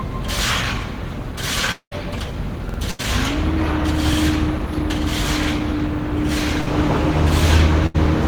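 From 1.71 to 1.93 s the sound likely suffers a long network dropout. About 0.2 s is lost, bridged by a fading smear that ends in roughly 80 ms of silence. A spectrogram shows a blurred band and then an empty column.

At 2.69 s, 4.13 s and 5.43 s a repeated buffer gives a stutter. A 46 ms piece replays twice at the first time and once at the others, which fits a 2048-sample buffer. The waveform shows identical blocks with hard edges at each join.

Bursts of packet loss occur at 2.91 s (80 ms), 6.61 s (60 ms) and 7.86 s (80 ms). Each briefly holds the last sound as a dimming buzz or hiss and skips ahead, which appears as a frozen, fading spectral slice.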